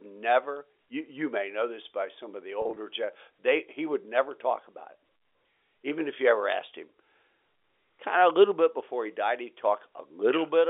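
From 2.62 to 2.76 s, right after "by some of the", packet loss with pitch repetition fills about 90 ms of scattered gaps (none longer than 30 ms) with held, buzzy pitch periods rather than silent dropouts.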